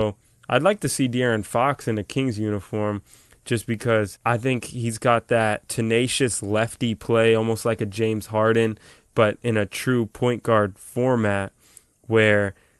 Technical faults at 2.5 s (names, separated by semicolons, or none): none